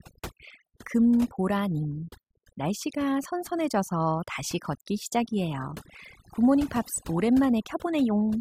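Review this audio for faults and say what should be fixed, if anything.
Overdone noise removal runs throughout: bands near the noise estimate are cut away, leaving a lowered floor that breaks up into twinkling specks, unlike codec warble. Set the noise reduction gentler, with less attenuation, and check that quiet speech survives.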